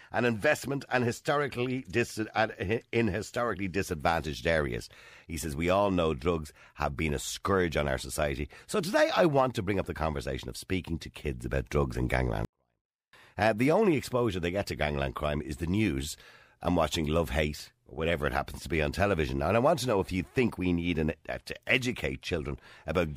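At 12.45 s the speech collapses into a 24-bit alignment error (too quiet) lasting until 13.13 s. Samples sitting in the low bytes of 32-bit words were read as full 32-bit integers, dropping the level by about 48 dB yet leaving it clean. The waveform shrinks to a near-flat line, and the spectrogram fades almost to blank.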